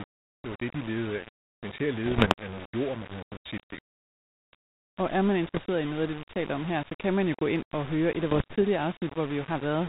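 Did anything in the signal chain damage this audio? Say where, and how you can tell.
Yes. Low bit depth without dither runs through the whole speech clip: grainy distortion that follows the voice, with quiet passages turning gritty and noise only about 15 dB below the signal. This likely comes from a sample-format conversion that rounded to about 4 bits without dither, so the error tracks the signal.

Bit errors on an ADPCM link appear at 2.06–2.34 s, 5.44–5.62 s and 8.30–8.56 s as pops and rough bursts with brief level jumps. Flipped bits on the G.726 link, a 32 kbit/s path, upset the decoder's step size and predictor, so each hit rings on for milliseconds.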